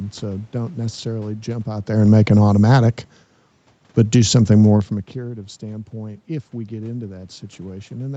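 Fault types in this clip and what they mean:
Automatic gain falling: between 1.9 and 3.23 s the gain control, finding the input too loud or its background noise too strong, lowers its gain by about 3 dB. The room noise sinks with the speech, unlike the talker moving around 1.5 s, where only the speech level shifts.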